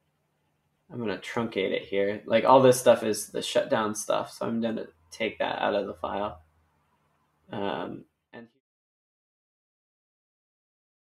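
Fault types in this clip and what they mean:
Sound cut by the noise suppressor: the level dips twice, from 4.87 to 5.14 s and then for about a second from 6.36 to 7.52 s, sinking by about 15 dB and about 18 dB at the deepest. The sound sinks in level rather than stopping. The suppressor misjudged these stretches as background noise and pulled them down harder than the surrounding audio. The second dip runs right into the smooth fade-out that ends near 8.6 s.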